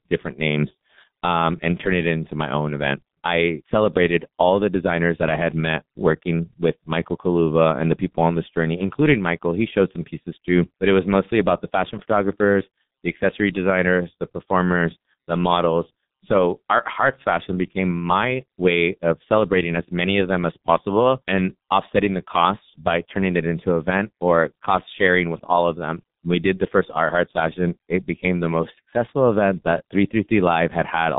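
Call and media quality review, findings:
G.723.1 codec, whole clip: muffled, hoarse speech, smeared consonants. Nothing above 3.8 kHz, line band about 150 Hz to 3.7 kHz. Heavy coarse-frame vocoder damage, fitting a 6.3 kbit/s mode. Spectrogram: hard ceiling near 3.8 kHz, blurred formants, blocky 30 ms texture.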